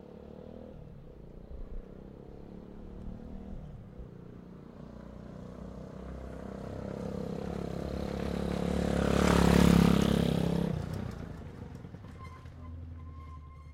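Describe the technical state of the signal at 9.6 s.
At 9.6 s the signal is intact, with no audible technical fault at that moment.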